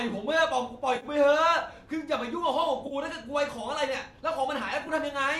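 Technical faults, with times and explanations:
0.96–1.06 s, 2.87–2.94 s and 4.81–4.89 s, AAC frame loss with concealment: coded frames went missing and the decoder bridged each gap by reusing the last good spectrum, so the sound there turns smeared, noisy and phasey. The first gap is about 60 ms and the second about 40 ms. The third is about 40 ms split into short drops, each near one frame long, spread over about 80 ms. The roughly 10 ms frame size points to a likely low-delay AAC stream.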